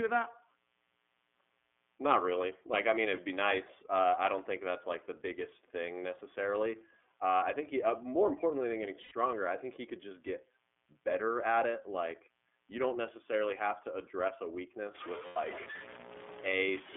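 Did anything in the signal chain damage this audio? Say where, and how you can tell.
Yes. Analogue wiring: a steady, raspy mains buzz built on 60 Hz harmonics runs throughout, about 40 dB below the speech, from switching spikes entering an unshielded or dimmer-fed path.

Codec: the whole clip passes through iLBC at 13.33 kbps with 30 ms frames. The band is limited to 250 Hz–3.5 kHz, and the speech has a plainly audible rough, synthetic coding quality.

Network: lost iLBC frames twice, 9.03–9.12 s (after "more importantly than getting", before "I think he could") and 15.26–15.37 s. Each 90 ms gap becomes a held, buzzy vowel, the decoder repeating the last pitch cycle.

Sample-format conversion: from 14.95 s, after "have to address a", to the end, the sound turns grainy, with error about 10 dB below the signal, likely from truncation to about 5 bits without dither.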